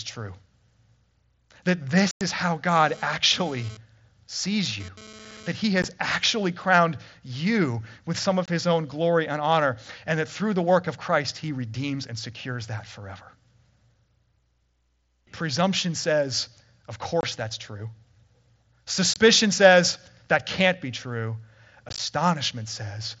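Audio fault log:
2.11–2.21 s, unconcealed Bluetooth headset packet loss: a hard-edged hole of about 98 ms just before "is how". A run of lost headset voice packets was replaced by silence, with nothing to fill the gap.
2.75–5.52 s, GSM phone buzz: a raspy 217 Hz buzz, about 21 dB below the speech, that comes and goes. A nearby 2G phone sending data in bursts is rectified by the audio circuit.
5.82 s, unconcealed Bluetooth headset packet loss: a 15 ms hard-edged dropout just before "actually crowned you with". Two short headset packets went missing and were left silent.
8.46–8.48 s, 17.21–17.23 s and 19.14–19.16 s, unconcealed Bluetooth headset packet loss: abrupt 22.5 ms gaps, the middle one between "says of" and "that's true". Each fits three lost 7.5 ms headset packets left silent.
21.89–22.00 s, unconcealed Bluetooth headset packet loss: rough, chopped crackle as 60 ms of dropouts scatter across about 105 ms, none longer than 15 ms. 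These are repeated short packet losses on the headset link with no concealment.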